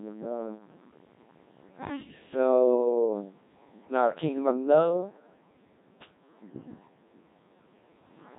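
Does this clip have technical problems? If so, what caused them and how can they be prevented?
Yes. Throughout the speech, a Codec 2 vocoder has resynthesised the voice from sine waves driven by pitch, voicing and envelope data, so it sounds heavily robotic and buzzy, fitting a 1.6 kbit/s mode. Unlike transform-codec warble, the timbre itself is synthetic. Carry speech over a waveform codec instead.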